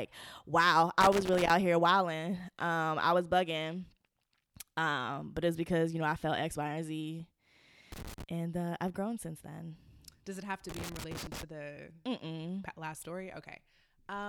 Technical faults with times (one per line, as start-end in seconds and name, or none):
1.01-1.50 loose connector crackle
7.92-8.23 loose connector crackle
10.69-11.43 loose connector crackle